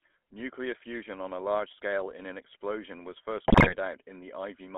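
Buzzy, gravelly speech runs through the whole recording, confined to a narrow telephone band from about 250 Hz to 3.5 kHz, with the codec damage plainly audible. That roughness is the signature of the GSM full-rate codec, which fits a 13 kbps stream. It models the vocal tract as a filter and drives it with a coarse pulse train that keeps only a fraction of the true excitation, so the fine detail of the voice is replaced by a grainy buzz. From 3.47 to 3.75 s the speech breaks up into squawks, pops and gargling, with sudden jumps in tone and level. These are GSM bit errors. Corrupted bits in the transmitted parameters reached the decoder across ten frames, and that error density points to a badly degraded radio link. Wrong filter, pitch and gain values then bent the spectrum and made the loudness lurch frame by frame for that stretch of just under 0.3 s.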